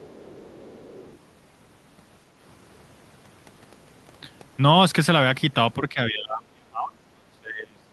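From the start to 1.17 s, a faint second voice sits well beneath the talker, roughly 25 dB down: the other side's voice leaking through. Its likely cause is an echo canceller leaving residual loudspeaker playback in the microphone signal.

From 5.89 s to the end of the clip, the talker's level falls sharply, at its deepest by roughly 30 dB. This is speech suppressed in double talk: with both sides active, the echo canceller likely attenuated the near-end talker along with the echo.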